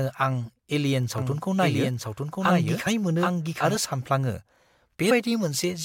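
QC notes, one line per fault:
1.18–3.75 s, doubled audio track: a second, full-band copy of the speech runs about a second behind the original and roughly 5 dB quieter, so phrases overlap with their own late repeat. The copy carries no decay or room colour, and it cuts in at 1.18 s and drops out at 3.75 s abruptly. This likely comes from the audio being captured again through a slower path, or from an edit holding two out-of-step copies.
2.86 s and 5.10 s, compressed frames skipped: the speech jumps forward as whole blocks of coded audio fail to play, either lost from the file or rejected by the decoder as damaged. About 150 ms goes missing at 2.86 s and about 70 ms at 5.10 s. Both gaps match multiples of a 21.3 ms frame, roughly seven frames and three frames.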